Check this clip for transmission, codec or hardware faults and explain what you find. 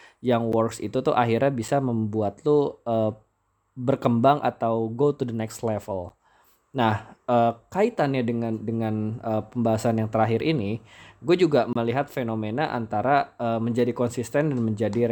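Three blocks of digital silence break up this speech clip. Twice the program likely failed to fill its output buffer in time, and each gap of about 10.7 ms fits a missed 512-sample buffer: at 0.52 s, just before "itu tuh akhirnya", and at 6.09 s, right after "to the next". A longer dropout of about 25 ms runs from 11.73 to 11.76 s, between "terakhir ini gue juga" and "fenomena antara uh menjadi". The waveform drops straight to silence and back with no fade, so the two short gaps sound like ticks and the longer one like a brief hole.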